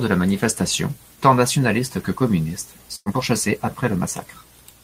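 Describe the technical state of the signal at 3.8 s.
At 3.8 s a jitter buffer speed-up is underway, running from 3.09 to 3.97 s, just after "tant nationalistes que communistes". The receiver's buffer had overfilled, so it trimmed short pitch-period slices repeatedly, about 50 ms in total. Speech plays roughly 4% faster at unchanged pitch.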